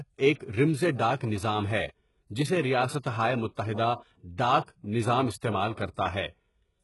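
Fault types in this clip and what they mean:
HE-AAC compression: The speech has a bright but synthetic top, likely from HE-AAC coding at a very low bitrate, around 12 kbps. The treble is rebuilt from copied lower bands, so s sounds turn gritty and metallic. Nothing is heard above 11.5 kHz.
Pre-echo: A short hiss runs ahead of sharp attacks, smearing them. The codec spreads its noise across a whole block, filling the quiet before the attack. It appears at 1.17 s, after "ایک رمزِ", for 35 ms, and at 4.65 s, before "نظا٘م استعمال", for 31 ms.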